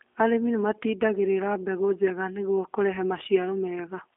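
From start to end, the speech carries G.729 codec damage, and it is plainly audible. The sound fits G.729A at 8 kbit/s. Each 10 ms frame is rebuilt from a vocal tract filter, a pitch predictor and a few pulses. Fine detail is lost. The result is rough and slightly synthetic. The line band runs from 300 Hz to 3.5 kHz. Nothing is heard above 3.6 kHz, so the sound is thin and muffled.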